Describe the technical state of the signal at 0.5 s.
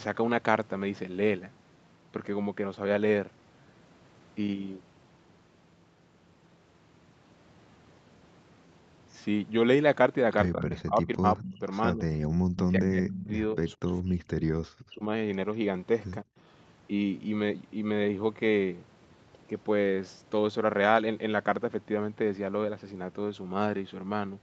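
At 0.5 s the speech is intact, with no dropout, glitch or distortion; the call path has its ordinary band limit, with nothing above 8 kHz.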